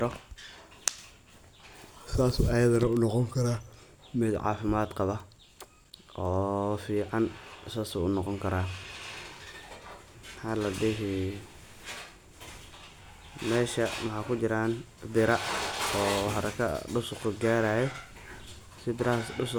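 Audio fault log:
Nothing to log here; I listened all the way through this speech recording and didn't catch a single problem.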